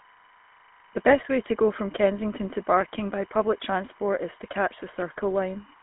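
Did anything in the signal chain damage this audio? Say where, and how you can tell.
Yes, three separate problems, from three different stages.

First, analogue wiring. Timecode bleed sits under the whole clip. There's a steady chirping warble flipping between two pitches near 1 and 2 kHz, well down at roughly 30 dB below the speech. The 25 frames-per-second rhythm of the chirp marks it as linear timecode. Its square wave has leaked in from an adjacent track or a cable run alongside the audio line.

Second, the codec. The whole clip carries the buzzy, gravelly grain of the GSM full-rate codec, and the damage is plainly audible. The band is squeezed to roughly 200 Hz to 3.4 kHz, so the top end is gone. The roughness fits that old 13 kbps codec. It rebuilds the voice from a vocal-tract model driven by sparse, regular pulses, which leaves that rasp on everything.

Third, the network. From 1.11 to 1.21 s the speech briefly breaks into a squawky, gargling burst, about a tenth of a second long. 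That's GSM bit errors. Corrupted bits on a weak radio link reached the decoder and scrambled the filter, pitch or gain values for a few consecutive codec frames. The spectrum bent or the level jumped until clean frames arrived again.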